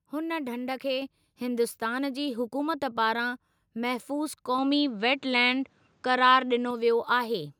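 At 1.02 s the call software judged the microphone too quiet and raised the device's input volume in a single step, a microphone volume stepped up by about 5 dB. The speech and the background noise behind it jump louder together at that instant, with no fade. The level simply sits higher from there on, as though someone had turned up the gain.

From 4.58 s to 6.71 s the input was likely switched to a poorer device, perhaps another microphone or a headset's call profile. This narrower path passes a narrower band, so the speech loses its top-end air and turns duller and boxier. A new noise floor comes in with it, sitting well below the speech, and the overall level shifts by a few decibels. The changeover happens with no gap of silence, and the fuller, brighter sound returns just as abruptly at 6.71 s.

At 5.53 s, inside that stretch, a handful of samples went missing, likely dropped samples lost for a tiny fraction of a millisecond. 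The waveform leaps straight from one value to a later one, and no audible sound is actually removed. What the listener hears is a single sharp click, which would show as a thin vertical line across the spectrum.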